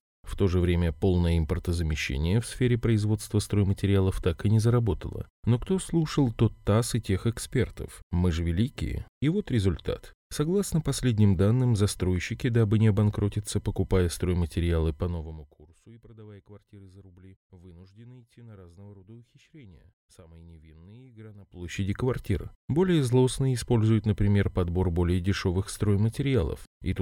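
Speech clip with zipper noise: a fast ticking as the level drops roughly 25 dB from 15.0 to 15.67 s, then climbs back from 21.43 to 21.80 s. It's stepped unsmoothed gain, about 1 dB and 2 dB jumps, some forty a second.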